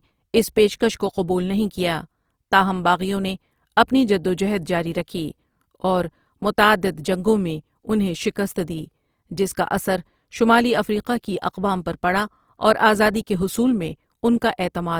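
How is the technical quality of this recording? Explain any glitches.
The quality takes a noticeable hit from lossy coding all the way through. It's likely Opus compression in its CELT music mode, which fits roughly 24 kbps. Short of bits, it fills bands with folded or noise content, so the speech sounds grainy and rough rather than swirly, though the bandwidth stays full, reaching about 20.3 kHz.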